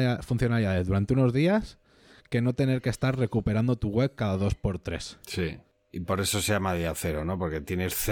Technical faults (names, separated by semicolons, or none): none